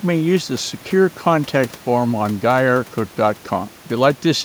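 The speech signal shows no technical faults, with only the room's own background noise audible about 26 dB below the speech.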